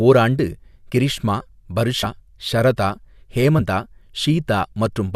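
At 2.02 s and again at 3.58 s the speech jumps forward, with compressed frames skipped each time. Whole frames of the encoded stream never reach the output, so roughly 70 ms of audio is lost at each point. A spectrogram shows an abrupt discontinuity in the speech pattern. The waveform shows a brief seam.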